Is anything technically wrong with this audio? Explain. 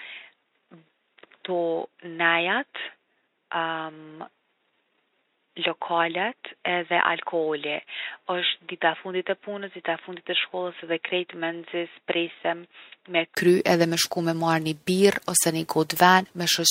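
Yes. From the start until 13.37 s the audio comes through what is likely a poorer input device, such as a headset's call profile, before switching to a better one. That device passes nothing above 3.8 kHz, so the speech sounds dull and boxy, sits about 5 dB lower, and carries its own noise floor around 55 dB down. At 13.37 s a brief gap of about 20 ms marks the switch, after which the sound opens up.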